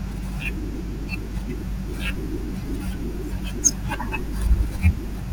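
Mains hum runs under the speech for the whole clip: a steady 50 Hz tone, nearly as loud as the speech itself, from power-line current leaking in through a ground loop or nearby transformer. A spectrogram shows an unbroken bright line at 50 Hz, and the waveform carries a constant low-frequency ripple.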